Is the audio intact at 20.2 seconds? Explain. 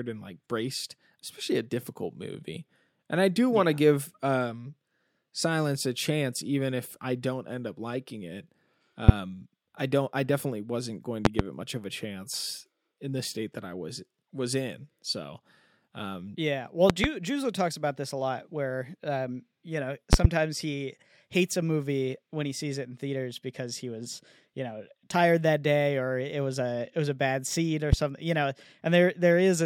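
No. From 20.13 to 20.27 s, just after "where um you know", a loud pop occurs, likely a sudden voltage pulse, heard as two sharp pops far louder than the speech, which continues underneath.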